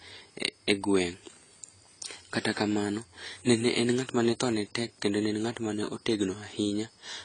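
Throughout, the speech carries plainly audible AAC compression damage. Nothing remains above 10 kHz, and sibilants and held vowels turn fizzy and warbling where bands are dropped or noise-filled. A plain low-pass filter would dull the top without that swirl. This likely reflects AAC-LC near 24 kbps.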